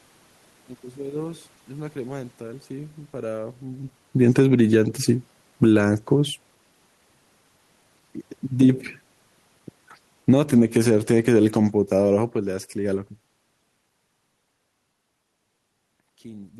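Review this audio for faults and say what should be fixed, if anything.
Automatic gain falling shows up twice, from 4.08 to 5.81 s and again from 10.14 to 13.09 s. The AGC decides the input is too hot and eases its gain down by about 8 dB, so the speech and the room noise behind it sink together.

Automatic gain rising overlaps the first drop, running from 4.68 to 6.24 s. The AGC swings back the other way and lifts gain by about 4 dB, and voice and background swell up in step over roughly a second and a half. The talker shifting position around 3.5 s is natural and not a system fault. So is the second move near 15 s.

To prevent this, slow the AGC's attack and release, or switch it off and set a fixed input gain, so ordinary shifts in talker distance don't pump the level.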